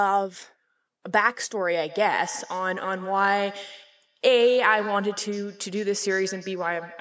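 From 1.88 s to the end, the speech carries a feedback echo between two devices: a second device replays the call audio into an open microphone, and each syllable returns roughly every 150 ms at about 16 dB below the speech. A spectrogram shows faint repeated copies trailing each syllable below the 8 kHz call-band ceiling.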